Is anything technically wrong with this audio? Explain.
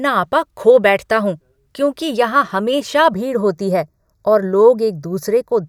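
Yes. From 3.14 s to 5.67 s, after "हूँ क्योंकि यहां हमेशा", there is channel delay with comb filtering: one channel lags by a fraction of a millisecond, and the mono sum cancels evenly spaced frequencies, starting around 3 kHz, so the speech turns hollow and phasey.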